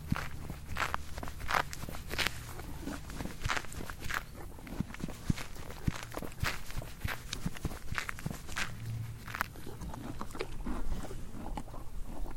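No technical faults can be heard anywhere in this audio.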